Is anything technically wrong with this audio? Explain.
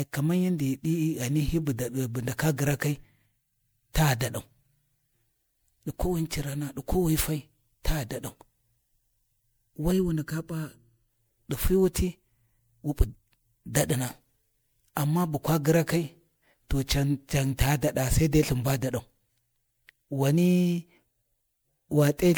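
Yes, there are two faults.

Generation loss runs through the whole clip. The speech is swirly, smeared and hollow, with softened consonant attacks, and nothing is present above 20.8 kHz. The likely cause is repeated MP3 encoding at 128 kbit/s, around five passes. Each decode and re-encode quantises the signal again on a shifted frame grid, so coding noise and spectral holes pile up beyond what that bitrate would produce in a single pass.

Channel delay with comb filtering occurs from 9.92 to 11.10 s, ending just before "ɗi fi". One channel lags the other by well under a millisecond, roughly 0.7 ms, and the two are summed to mono. Content common to both cancels at regularly spaced frequencies, starting near 700 Hz and recurring about every 1.4 kHz. For that stretch the speech sounds hollow and phasey, with fixed notches carved into the spectrum.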